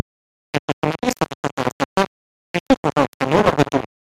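Throughout the speech, a DC offset shifts the whole waveform off zero. It is inaudible, unlike hum, but shows as steady energy at the spectrum's floor and eats headroom.

From the first moment to the end, microphone overload flattens the peaks, driven about 14 dB past the limit with nearly every sample clipped. It sounds like constant harsh crackle rather than occasional distortion, likely from input volume set far too high.

At 2.71 s, the microphone volume steps down by 2 dB, likely the call software reacting to the clipping. Voice and background drop together in one instant, unlike a gradual fade.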